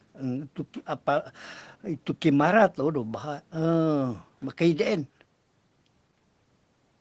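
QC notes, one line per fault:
No faults found in this speech.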